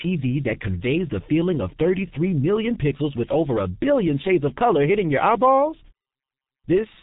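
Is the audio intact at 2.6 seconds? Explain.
No. At 2.6 seconds the speech carries G.723.1 codec damage, and it runs through the whole clip. This low-rate telephony codec models the voice in 30 ms frames and updates that model slowly. Nothing above 3.8 kHz gets through. The speech sounds muffled and hoarse, and consonants smear together. The damage is heavy, which fits a bitrate of about 6 kbit/s.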